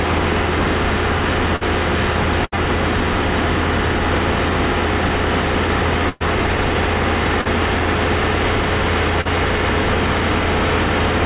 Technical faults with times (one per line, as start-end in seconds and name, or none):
1.56-1.64 burst of packet loss
2.45-2.55 burst of packet loss
6.09-6.23 burst of packet loss
7.41-7.48 short concealed packet loss
9.21-9.28 short concealed packet loss